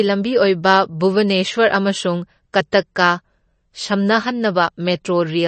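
From start to finish the speech has plainly audible coding damage, likely from MP3 compression at a low bitrate, which fits roughly 32 kbps. Nothing remains above about 8.3 kHz, so the top of the spectrum is cut off flat and sibilants lose their edge. With so few bits available, weak frequency components drop in and out from frame to frame, producing a watery, swirling texture, and consonant onsets sound smeared.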